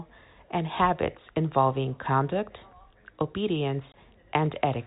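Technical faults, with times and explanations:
3.92–3.94 s, packet loss filled with silence: the speech drops out for 20 ms, which fits a single lost packet, and the receiver inserts silence in its place. The abrupt cut to silence and back leaves hard edges, over G.711 telephone-band coding.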